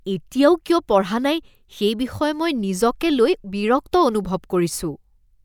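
A speech recording, and nothing is technically wrong with it.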